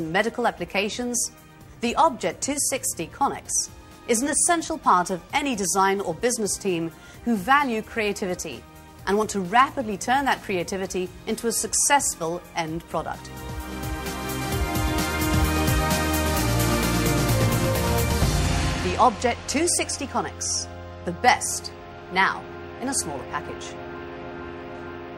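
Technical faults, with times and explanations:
No technical faults can be heard in this clip. Nothing in it calls for a time or an explanation.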